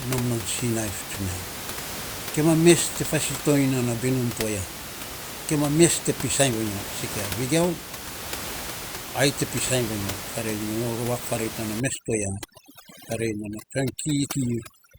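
From 11.80 s to the end of the clip at 14.99 s, the speech shows overdone noise removal. The room noise sits only about 10 dB below the voice, so an aggressive noise reducer cuts individual frequency bands near its noise estimate, taking low-level parts of the speech with them. The background drops and breaks up into twinkling, chirpy specks.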